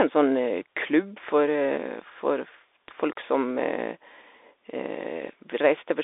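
The whole clip runs through a Bluetooth CVSD headset codec: speech squeezed into roughly 300 Hz to 3.6 kHz, nothing above 3.8 kHz, with scratchy sibilants and a grainy hiss underneath.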